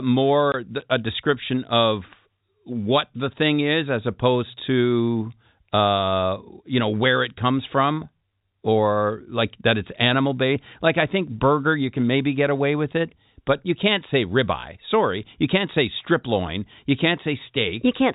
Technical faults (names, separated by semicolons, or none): packet loss filled with silence